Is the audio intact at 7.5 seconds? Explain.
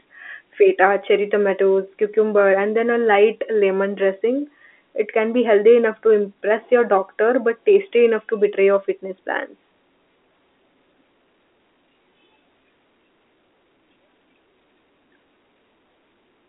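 Yes, the audio is intact at 7.5 seconds, with the speech carried cleanly through G.711 telephone coding in its usual narrow band of roughly 250 Hz to 3.4 kHz.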